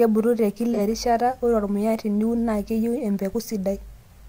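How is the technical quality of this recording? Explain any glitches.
One glitch stands out in the speech, a short AAC frame loss with concealment. It runs from 0.73 to 0.80 s, about 43 ms, which fits a single lost frame. The decoder had no data for that stretch. It rebuilt the gap from the last good spectrum, reusing its energy with randomised signs. The gap is too short to fade to silence. It comes across as a brief smeared, noisy and phasey blur.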